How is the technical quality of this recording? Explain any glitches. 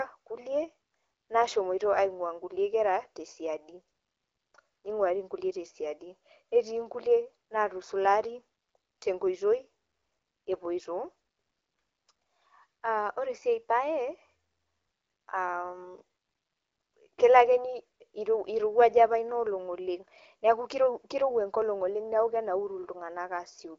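Nothing goes wrong in this speech recording, which comes through an AMR wideband (HD Voice) link at 12.65 kbit/s, a rate where that codec stays clear.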